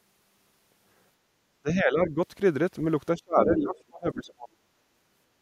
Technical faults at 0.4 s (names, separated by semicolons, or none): none